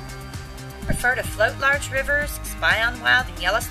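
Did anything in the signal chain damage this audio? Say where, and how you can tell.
Yes, there's damaged data in the compressed stream, so the problem sits at the codec or storage stage rather than anywhere analogue. You hear two short glitches, one at 0.88 s and another at 3.28 s, each lasting under 20 ms. Some of the encoded bytes there were corrupted, so the decoder misread those frames, lost sync and had to find the next valid frame header before it could decode cleanly again.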